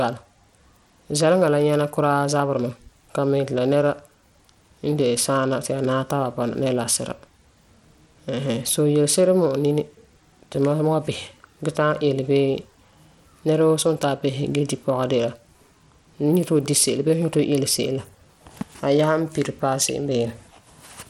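From start to finish, the speech carries a gritty, grainy noise, with the treble flickering in and out and nothing above 19.6 kHz. This is likely Bluetooth SBC compression at a starved bit pool, fitting about 96 kbps: coarse sub-band quantisation, not an MP3-style swirl or a clean low-pass.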